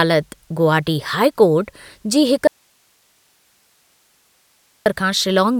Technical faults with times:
2.47-4.86 audio dropout to a faint residue

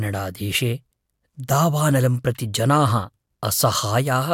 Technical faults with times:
none

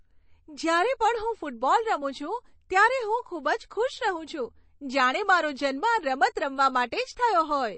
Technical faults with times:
0.00-7.77 MP3 compression

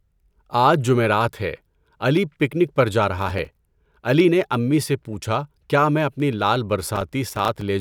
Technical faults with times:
3.18-3.92 processor overload crackle
6.87-7.62 processor overload crackle

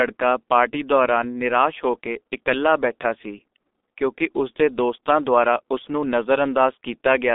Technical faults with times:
0.00-7.35 G.723.1 codec

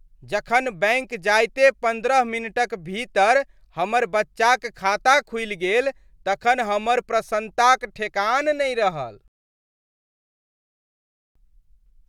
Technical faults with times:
9.28-11.35 rebuffering stall

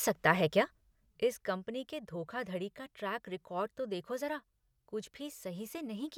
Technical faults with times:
none

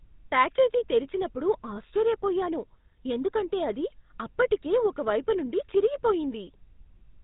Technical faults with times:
0.00-7.23 GSM full-rate codec

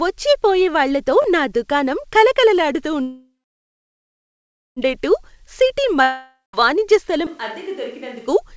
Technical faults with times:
1.22-1.24 repeated buffer
3.02-4.79 call audio freeze
6.03-6.56 long network dropout
7.27-8.27 switch to a distant microphone

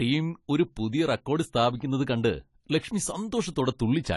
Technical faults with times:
0.00-4.16 AAC compression

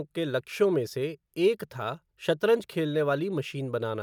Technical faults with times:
none

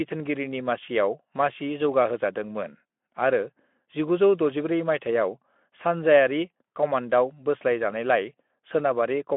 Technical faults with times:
none

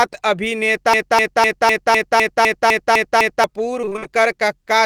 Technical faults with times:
0.93-3.44 broken-record loop
3.81-4.07 repeated packet loss (robotic sound)

